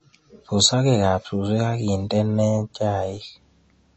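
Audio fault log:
throughout, MP3 compression: the speech sounds plainly watery and swirly, likely from a bitrate near 32 kbps; the spectrogram shows nothing above 8 kHz and flickering patches below.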